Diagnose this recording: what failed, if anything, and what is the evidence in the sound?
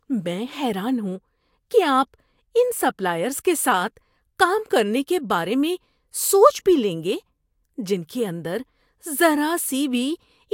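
Nothing in this speech recording points to a failure at any stage of the chain, from the analogue input through conversion, buffering, transport and playback.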